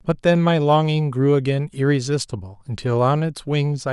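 No technical faults can be heard anywhere in this recording.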